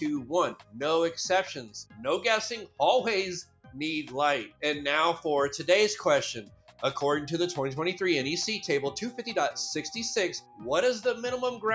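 Throughout, a noise suppressor applied to music or sounds is active. Built for speech, it treats held sound as noise, so levels pump by around 5 dB.

Sound is cut by the noise suppressor at 0.57 to 0.75 s, 3.44 to 3.75 s and 6.44 to 6.81 s. Level sinks by about 11, 12 and 12 dB. Sustained parts thin out, and the call processing leaves nothing above 8 kHz.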